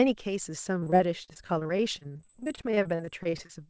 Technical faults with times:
0.80-3.51 repeated packet loss (robotic sound)

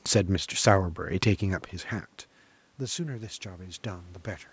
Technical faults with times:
2.79-4.16 automatic gain rising

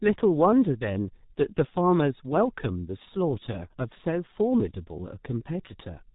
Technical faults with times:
0.00-6.15 G.723.1 codec

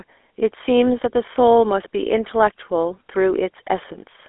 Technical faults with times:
0.00-4.28 GSM full-rate codec

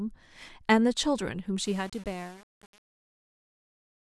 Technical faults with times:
1.65-4.11 truncation distortion on a fade

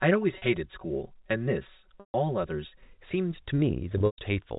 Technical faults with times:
0.00-2.83 channel delay (comb filtering)
0.38-0.42 packet loss with pitch repetition
2.00-2.14 packet loss with pitch repetition
3.98-4.18 packet loss with pitch repetition

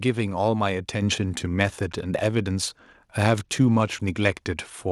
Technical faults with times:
1.02 microphone volume stepped up
1.17-4.14 Bluetooth SBC bit pool drop

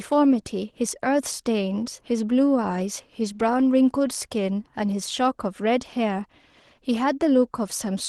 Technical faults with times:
none

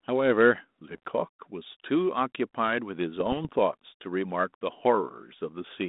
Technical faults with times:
0.97-1.09 bit errors on an ADPCM link
3.16-3.49 bit errors on an ADPCM link

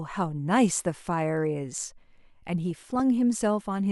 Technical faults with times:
0.70-0.79 DAB burbling
2.71-3.00 DAB burbling

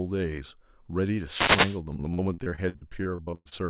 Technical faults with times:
1.26-1.81 wireless microphone noise hit
2.14-3.62 repeated packet loss (robotic sound)

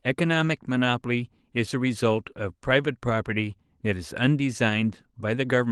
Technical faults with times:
0.47-0.49 lost packet rebuilt from error correction

